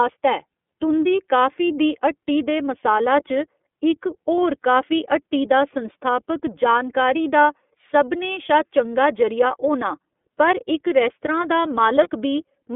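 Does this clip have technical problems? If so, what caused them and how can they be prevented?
Yes. The iLBC codec limits the whole clip to about 250 Hz to 3.5 kHz. The speech sounds rough and synthetic, which fits its 13.33 kbps, 30 ms frame mode. A wideband codec such as Opus would prevent this.

Lost iLBC frames cause a brief buzzy, held sound at 4.36 s, before "काफी हट्टी दा संस्थापक", and at 12.03–12.09 s, after "रेस्तरां दा". Each fits one lost 30 ms frame. The decoder filled it with a repeated pitch cycle. A steadier network or forward error correction would prevent this.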